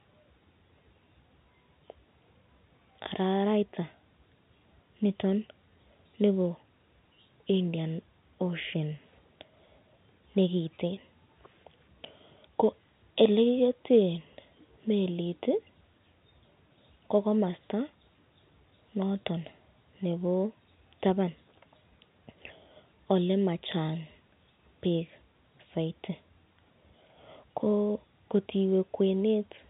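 No technical faults occur at any point in this telephone-band speech clip.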